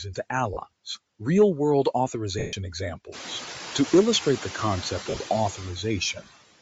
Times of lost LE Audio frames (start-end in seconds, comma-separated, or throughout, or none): 0.54-0.57, 2.39-2.53, 5.01-5.17